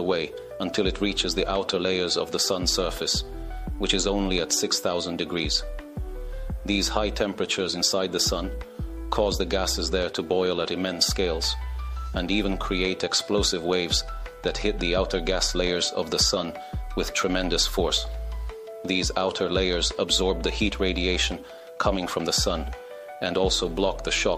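No technical faults turn up anywhere in the recording.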